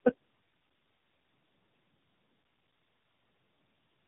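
Speech, and the whole clip shows tandem speech coding: it sounds like three low-rate model-based speech codecs in a row, something like AMR-NB at 7.95 kbit/s, then G.729A, then AMR-NB again, decoded and re-encoded at each hop. Every coder chews on the previous one's already degraded output, so it comes out rougher, noisier, muffled and warbly, with nothing above 3.8 kHz. Then there's a digital wireless dropout from 2.36 to 3.20 s, a clean hole of near silence lasting about 0.85 s. The receiver lost too much data and muted behind a very short fade, with no noise burst on either side.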